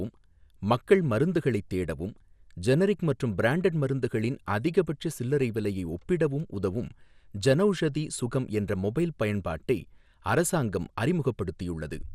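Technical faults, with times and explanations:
Throughout, MP2 compression: the speech sounds dull, with a gurgling, granular roughness over the whole clip and no content above 15.8 kHz. This is likely MPEG Layer II coding that was too short of bits, which fits a rate around 80 kbps. The codec splits the signal into 32 sub-bands and shares out a small bit budget among them, so upper bands drop out, flicker on and off, and the bands that remain are coarsely quantised.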